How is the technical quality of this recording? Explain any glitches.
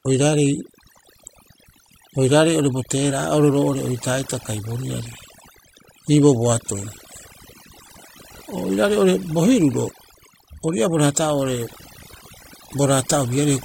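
The recording suffers from overdone noise removal, and it runs the whole way through. A noise reduction stage was pushed too hard. Wherever a frequency band sits close to its idea of the noise, it pulls that band far down or shuts it off. Softer parts of the speech fall below that line and vanish too. The gaps between phrases drop away, breaking up into twinkling, warbling specks.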